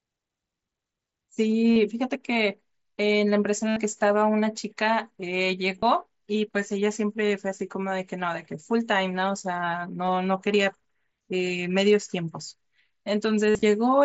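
Concealed Bluetooth headset packet loss occurs at 1.73–1.76 s, 3.69–3.76 s, 5.79–5.83 s, 10.06–10.08 s, 11.58 s and 13.47–13.63 s, over the wideband mSBC link. Lost packets are filled by repeating the closest-matching recent waveform, so the gaps are never silent. The shortest is nearly hidden. The 75 ms run at 3.7 s and the scattered burst near 13.5 s become a held, buzzy tone with a slight warble on recovery, unlike the hard silence or clicks of plain dropouts.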